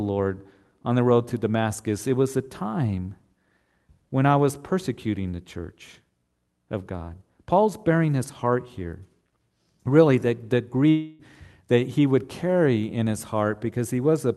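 A likely long network dropout stopped audio arriving from 10.89 to 11.21 s. The receiver stretched the last sound into a fading buzz across the lost 0.3 s.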